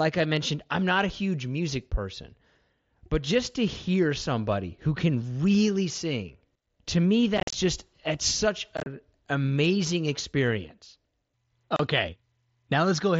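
Speech over an mSBC headset link, with unconcealed Bluetooth headset packet loss: short holes with abrupt edges at 7.38–7.54 s after "really sing to me", 8.77–8.86 s after "just it's such", and 11.76 s. Concealed loss would smear or repeat the sound instead.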